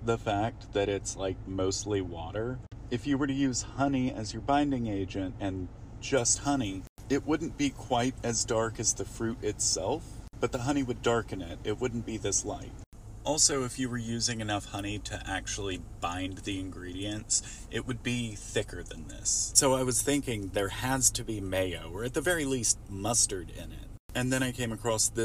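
From 6.17 s to the end, pre-emphasis is left on: treble lifted on a 75 µs FM curve was never given its matching de-emphasis. The top end rises steadily above roughly 2 kHz, reaching about 14 dB at 10 kHz relative to 1 kHz, so the sound turns thin, bright and hissy. Unlike a resonant EQ peak, the lift is a smooth, ever-rising slope.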